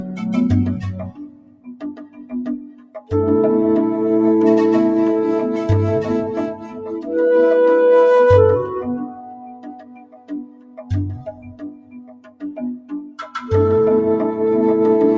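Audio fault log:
Throughout: noise suppressor applied to music or sounds. A speech-tuned suppressor keeps treating steady, non-speech content as noise, so level swings by about 20 dB. On a waveform the envelope pumps unevenly. On a spectrogram sustained bands fade and recover while onsets stay bright, within the call path's 8 kHz ceiling.
1.06–2.34 s, 2.56–3.11 s, 6.54–7.09 s, 9.01–10.91 s, 11.16–12.43 s, 12.75–13.49 s: sound cut by the noise suppressor. Held and decaying sound in these spans is pushed down by about 15 dB, or about 10 dB at 6.54 s, so it thins and tails end early. A waveform shows sagging stretches, and a spectrogram shows dimmed sustained energy with transients intact.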